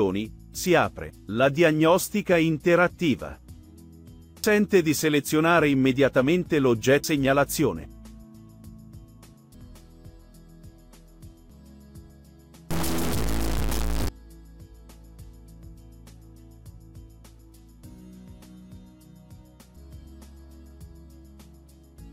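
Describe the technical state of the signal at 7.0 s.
At 7.04 s there is a single instant of damaged data in the compressed stream. The decoder misreads the corrupted frame, loses sync and searches for the next valid frame header, producing a brief chirp or blip at that point.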